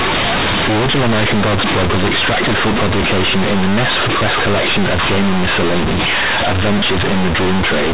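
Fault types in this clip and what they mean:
Companded audio read as linear: the speech was stored as A-law G.711 bytes but played back as plain 8-bit samples with no expansion, so every sign change jumps across about half the output range. Quiet and loud passages come out equally loud, with harsh buzzy distortion and strong noise filling the pauses. Ordinary clipping damages only the peaks and leaves pauses quiet.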